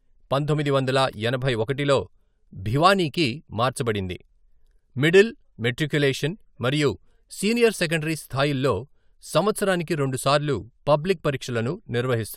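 No technical faults turn up anywhere in this recording of speech.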